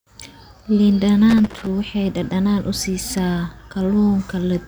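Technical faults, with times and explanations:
1.30–1.67 s, loose connector crackle: a worn contact repeatedly breaks the speech signal, giving irregular scratchy bursts, visible as ragged dropouts and broadband vertical spikes.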